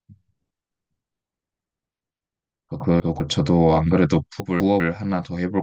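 At 2.8 to 3.2 s and again at 4.4 to 4.8 s, the speech jumbles briefly. These are chunks out of order: two 200 ms chunks swap places, leaving three hard joins each time.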